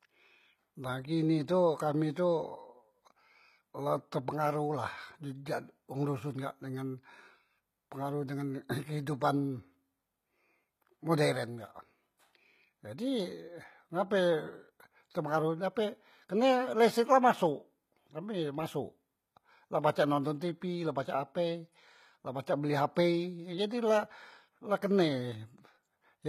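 The whole speech clip has plainly audible HE-AAC compression damage, likely from a low bitrate around 20 kbps. The treble is copied up from lower bands and cuts off at 14.9 kHz, so s sounds come out gritty and lispy.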